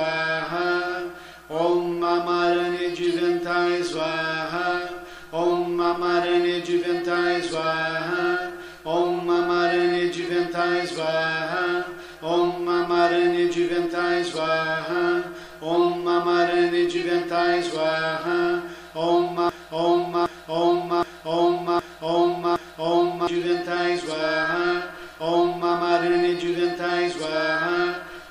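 From 19.49 s to 23.27 s, a broken-record loop: a fragment of about 0.77 s repeats exactly, back to back, five times. The likely cause is a stalled player, encoder or stream resending its last held fragment, so the audio for that stretch is lost.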